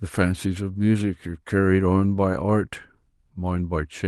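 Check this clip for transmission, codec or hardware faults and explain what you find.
Nothing to report: no faults are audible anywhere in the speech recording.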